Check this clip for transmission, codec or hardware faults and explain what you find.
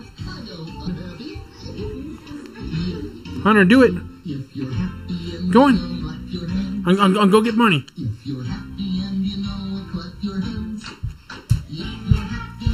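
Two faults are present: a comb filter throughout, and three brief decoding glitches.

Channel delay (comb filtering) runs throughout: one channel arrives a fraction of a millisecond late, so summing to mono cancels evenly spaced frequencies from roughly 700 Hz upward, leaving the sound hollow and phasey.

Damaged data in a compressed stream appears at 0.84 to 0.88 s, at 5.99 s, and at 10.50 to 10.52 s. Corrupted frames break decoder sync, producing short chirps or blips.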